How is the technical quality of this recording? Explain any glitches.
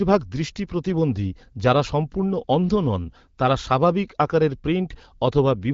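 Nothing here counts as a glitch: the speech simply has the character of an AMR wideband (HD Voice) call, with the top end fading out around 7.5 kHz and a clarity that fits a 12.65 kbit/s rate.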